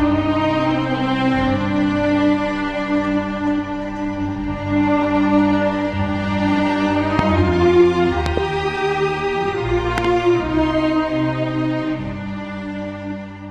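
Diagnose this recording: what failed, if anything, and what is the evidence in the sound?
A voltage pulse, likely from a plug, switch or static discharge in the analogue wiring, was added to the signal, producing loud pops about 15 dB above the sound: a single pop at 7.19–7.21 s, then double pops at 8.26–8.40 s and 9.98–10.07 s, with the sound continuing underneath.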